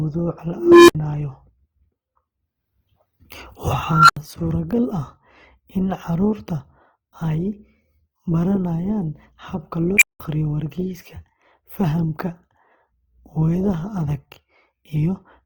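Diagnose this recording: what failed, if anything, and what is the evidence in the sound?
The codec stage is the likely culprit for damage heard across the whole clip: Opus compression at a very low rate. The speech keeps its full bandwidth and does not turn muffled, but it is plainly rough, grainy and noisy throughout. That fits Opus in its music mode starved of bits and patching bands with folded or noise-like content. The roughness points to a bitrate around 16 kbps.

In the processing chain, an unstable filter blew up three times. A recursive stage with bad coefficients fed its own output back until it ran away. Each time a tone swells, clips and then cuts to silence before the filter resets. At 0.55 to 0.95 s, a low tone near 300 Hz builds over about 335 ms, followed by about 65 ms of silence. At 3.89 to 4.17 s, a whine around 1.5 kHz builds in about 200 ms, then about 78 ms drops out. 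At 9.97 to 10.2 s, a squeal around 2 kHz rises in only about 42 ms and leaves about 184 ms of silence.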